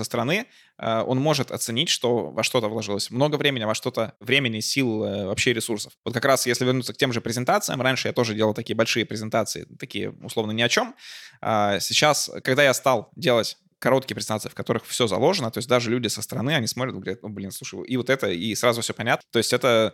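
At 19.21 s, right after "это и сразу все", the speech breaks with a brief, harsh blip typical of damaged data in a compressed stream. Corrupted bytes reached the decoder, which misread the affected frame, lost sync and had to hunt for the next valid frame header before resuming. On a spectrogram the blip shows as a thin vertical smear of energy breaking the speech harmonics. The waveform has an abrupt discontinuity at that instant.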